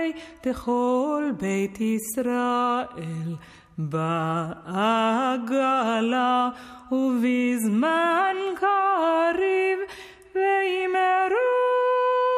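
No technical fault can be heard anywhere in the audio. No moment stands out as needing a timestamp or a closer listen.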